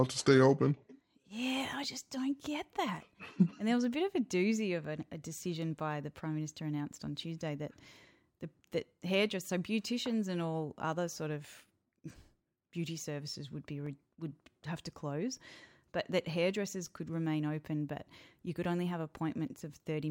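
Overlapping chunks: the speech was handled in blocks of 3.0 s, and each new block begins about 6.5 ms before the previous one finished, so that tiny slice plays twice at every join. The result is a brief click or stutter at 1.84 s (just before "just don't get that"), 4.85 s (before "an a decision by"), 13.87 s (between "beauty services would be" and "would have to close") and 16.87 s, spaced at the chunk interval.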